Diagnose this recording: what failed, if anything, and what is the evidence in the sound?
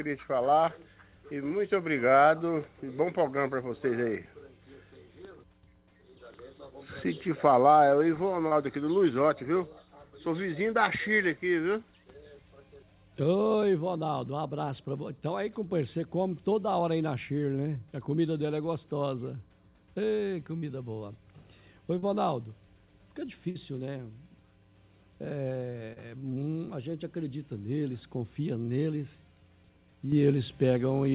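Short concealed packet loss at 8.48 to 8.52 s, 20.58 to 20.63 s, 21.98 to 22.03 s and 25.93 to 25.97 s, a network-stage fault. Each gap is a brief smear or wobble in the sound, lasting about 30 to 40 ms. Those packets arrived too late for the jitter buffer, so the decoder patched each hole by extending the preceding sound and then cross-faded back into real audio.

Burst of packet loss at 23.50 to 23.56 s, also on the network side. About 50 ms of consecutive audio failed to arrive. The receiver carried the last sound forward for roughly 46 ms while fading it, which gives a held, decaying buzz or hiss. Playback then picks up further along, and the material from that stretch is simply absent. Because the whole call path is G.711 mu-law with nothing above 4 kHz, the concealed fill sounds as band-limited as the rest.

Sudden gain jump at 30.12 s. From that instant to the end of the clip, the sound and the background noise step up together by about 7 dB with no ramp. 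Since the noise floor rises in lockstep with the signal, this is a digital gain change rather than a louder source, most likely a level setting in the call processing applied without smoothing.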